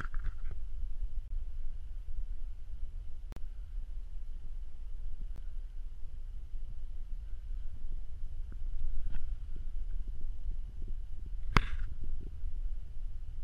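The stream's segment time stamps don't line up, leaving a gap between stream segments that the player fills with silence at each boundary, which fits segments about 2 s long. The audio drops out in short, hard-edged holes at 1.28–1.31 s (about 25 ms), 3.32–3.37 s (about 40 ms) and 5.36 s, spaced roughly two seconds apart. Nothing is lost; the sound simply resumes after each pause.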